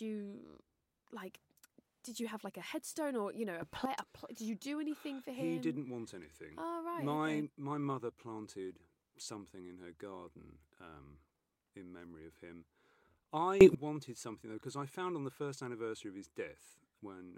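At 3.62 s, just after "or you know a", the speech and the background noise both leap up by about 12 dB at once, holding until 3.85 s, when "a did you do" follows. At 13.61 s, just before "wanted something though because", a harder jump of about 20 dB lasts until 13.75 s. Each is a sudden gain jump, likely a digital gain setting applied from one sample to the next with no ramp.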